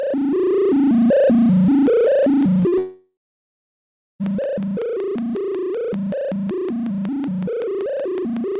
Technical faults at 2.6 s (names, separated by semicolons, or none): train of clicks; short concealed packet loss